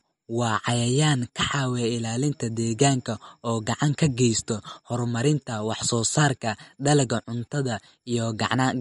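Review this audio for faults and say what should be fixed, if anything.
Throughout the speech the sound is watery and swirling, sibilants take on a metallic edge, and nothing at all remains above 11.2 kHz. The likely cause is MP3 compression at a low bitrate, around 48 kbps: the encoder cut the treble at a fixed point and let weak frequency lines flicker on and off between frames. To prevent it, keep an uncompressed master and encode at a higher bitrate.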